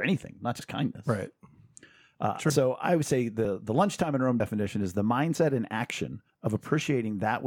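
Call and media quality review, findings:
Short skips with abrupt joins at 2.50 s (just before "I would say"), 3.45 s, 4.40 s (just before "is the") and 5.35 s (just after "is the"), each dropping about 50 ms. Audio missing between chunks, likely from a recorder working in 1 s chunks and losing a slice at each handover.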